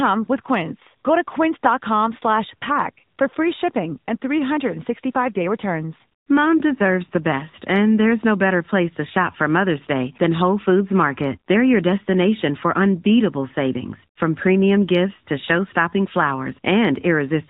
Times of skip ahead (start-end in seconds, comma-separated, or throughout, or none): none